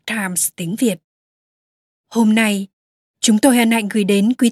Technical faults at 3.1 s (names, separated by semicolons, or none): none